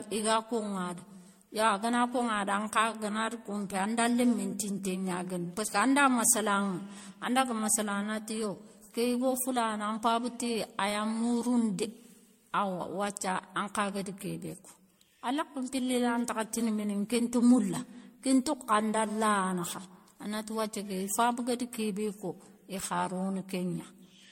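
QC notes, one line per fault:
Throughout, generation loss: the speech sounds swirly, hollow and smeared, with blurred attacks and nothing above 16.6 kHz, fitting roughly 65 kbit/s MP3. The likely cause is around seven decode-and-re-encode passes, each quantising on a shifted frame grid, so noise and spectral holes accumulate.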